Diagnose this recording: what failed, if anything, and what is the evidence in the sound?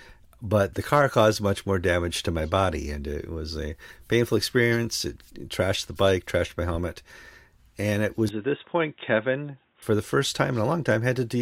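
From 8.29 s to 9.82 s the speech abruptly turns dull and boxy, then clears again, with no gap at either transition. This points to an input switched to a poorer device, likely a change of capture device at the driver level, with the path then switching back. The substitute path passes nothing above 3.8 kHz, sits a few dB quieter, and adds its own faint noise floor roughly 45 dB under the speech. On a spectrogram the energy above 3.8 kHz is sharply cut across that span; the waveform envelope shrinks slightly.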